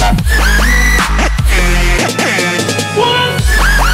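No technical faults can be heard anywhere in the audio; the signal stays intact and continuous throughout.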